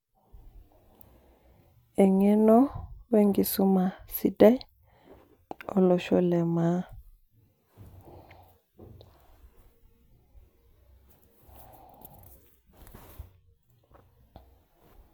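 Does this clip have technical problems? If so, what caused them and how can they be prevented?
No, there are no technical problems to be heard in this speech clip. With no faults present, there is nothing here that needs preventing.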